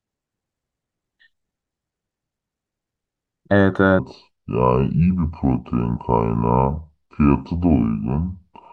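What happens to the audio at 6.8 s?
At 6.8 s the speech sits inside a section at the wrong speed, running from 3.99 s to the end at 0.705x, likely a clock mismatch, so it sounds slow, drawn out and about seven semitones deeper.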